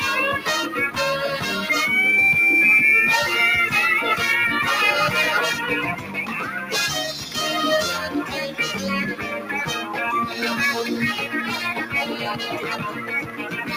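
A noise suppressor built for speech processes the whole clip, treating steady parts of the sound, ambience and decays as noise. Its gain moves over a range of roughly 10 dB, so onsets pass while sustained material and tails are pulled down unevenly, giving a pumping, thinned character.

The sound is cut by the noise suppressor at 5.95–6.73 s (drop of about 8 dB), 9.14–9.51 s (about 8 dB), 12.1–12.61 s (about 6 dB) and 12.9–13.73 s (about 9 dB). In each stretch the suppressor misreads the sound as noise, so it sinks below its surroundings or its decay is clipped short.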